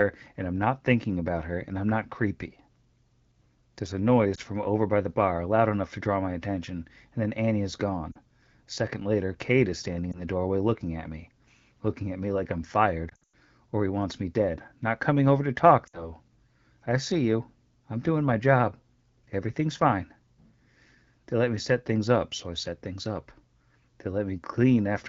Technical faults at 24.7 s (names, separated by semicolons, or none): none